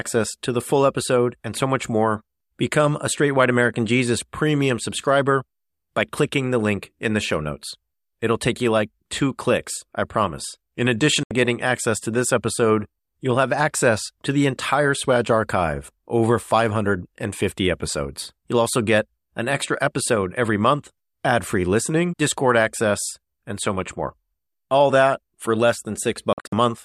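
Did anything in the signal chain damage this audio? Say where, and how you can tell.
Yes. The audio snaps to silence with a 3 ms fade from 11.23 to 11.31 s, just before "getting access to this." After "that for less," it breaks into scattered holes from 26.33 to 26.53 s, the longest 48 ms. This is a digital broadcast dropout: the receiver muted failed frames, and their content is gone.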